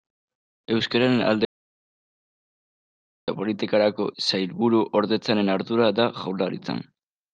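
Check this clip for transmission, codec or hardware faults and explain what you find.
One fault: an audio dropout to silence from 1.45 to 3.28 s, likely a lost input or stray mute, leaves about 1.83 s of silence. The speech cuts off mid-flow, no room tone remains, and it resumes abruptly.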